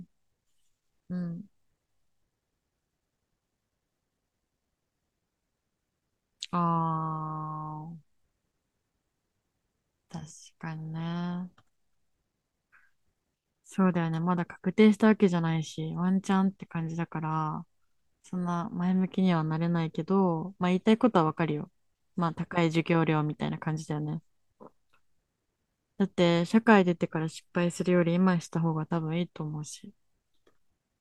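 No technical faults can be heard anywhere in this recording.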